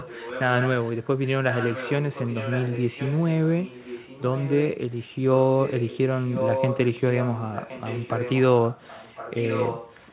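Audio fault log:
0.00–0.42 s, 0.58–1.07 s, 1.51–1.93 s, 2.12–4.77 s, 5.49–8.41 s, 8.71–10.13 s: echo leak. A fainter copy of the speech returns about 1.06 s late, roughly 5 to 15 dB below it. It is likely leaking past a loudspeaker-side echo canceller. It is a distinct, time-shifted repeat rather than a reverberant smear.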